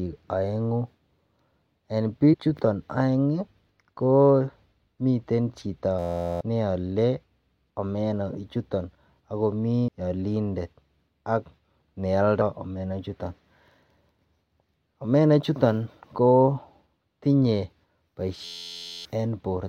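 At 2.32–2.35 s, a short glitch cuts through the speech. That is damaged data in a compressed stream. Corrupt bytes threw the decoder off, and it skipped ahead to the next good frame. Another brief blip follows at 4.83 s.

From 5.99 to 6.41 s the speech freezes into a steady buzz. This is a system hang loop. The machine stalled while the hardware replayed one 11.61 ms piece of audio, which fits a 512-sample buffer. It repeats 36 times at 86.1 Hz, and about 0.4 s of speech is lost.

More compressed-stream blips follow at 9.87 s and 12.40 s.

A second hang loop runs from 18.45 to 19.05 s. The same 11.61 ms buzz repeats 62 times, and about 0.7 s of speech goes missing.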